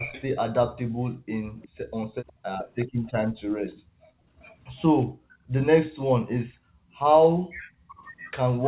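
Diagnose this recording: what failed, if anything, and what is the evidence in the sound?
Speech suppressed in double talk at 0.0–0.15 s and from 7.89 s to the end: speech drops steeply, with roughly 35 and 40 dB cuts, likely the call echo canceller ducking the local talker along with the loudspeaker echo.

Echo leak at 0.15–0.21 s, 1.62–3.11 s and from 7.33 s to the end: a copy delayed 364 ms, roughly 20 to 25 dB down, likely residual loudspeaker echo the call processing failed to cancel.

Background gated by the echo canceller at 0.79–0.99 s and 2.33–6.95 s: room sound falls away by about 40 dB, as the call processing clamps the microphone during loudspeaker playback.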